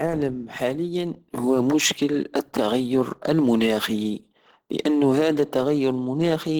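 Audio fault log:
throughout: Opus compression, likely at its hybrid speech setting. The speech sounds hoarse and grainy, with rough, noise-filled upper bands. The full bandwidth remains, cutting off near 20.2 kHz, and the plainly audible damage fits a low bitrate around 16 kbps.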